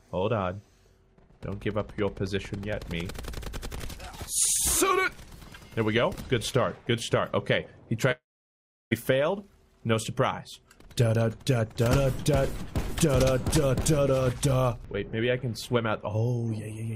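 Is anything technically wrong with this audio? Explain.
Yes. Between 8.11 and 8.93 s the stream was likely cut by a long network dropout, so about 0.8 s of audio never arrived. The receiver drew out the last sound as a short fading buzz or hiss, followed by 0.69 s of silence, and the sound resumes with that portion lost.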